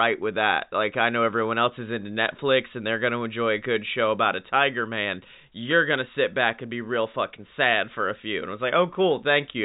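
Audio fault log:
No faults were found in this speech clip. The G.711 telephone coding path is working as it should, holding the sound to a telephone band with nothing above about 3.8 kHz and at most a faint trace of coding noise.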